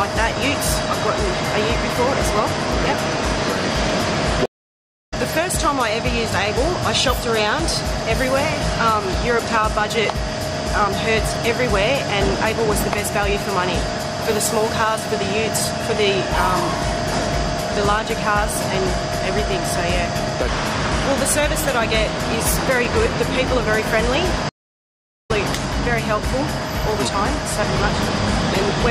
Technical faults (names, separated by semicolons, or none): stream reconnect